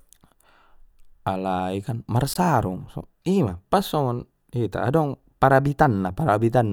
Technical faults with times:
2.33-2.36 gap at a join of encoded pieces

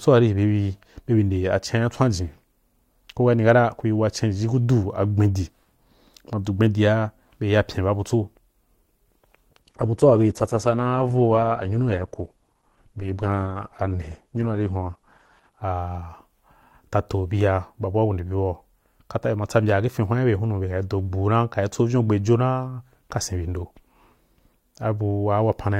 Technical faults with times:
9.62-15.62 adaptive stream at a lower bitrate

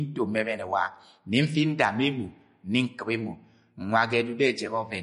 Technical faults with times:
0.00-5.02 MP3 compression

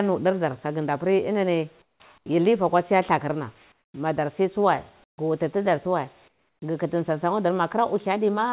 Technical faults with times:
1.82-2.00 comfort noise in place of the background
3.72-3.94 comfort noise in place of the background
5.04-5.18 comfort noise in place of the background
6.28-6.62 comfort noise in place of the background

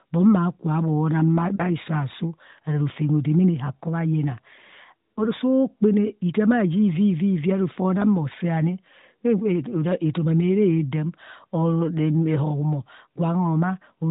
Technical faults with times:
1.56-1.61 lost AMR speech frames
5.14-5.26 lost AMR speech frames

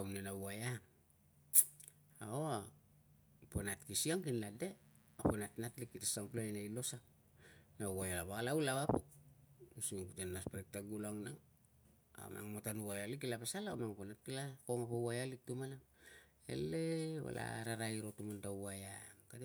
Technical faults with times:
4.49-6.35 mains buzz

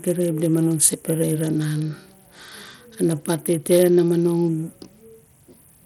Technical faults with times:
0.00-5.86 Bluetooth SBC compression

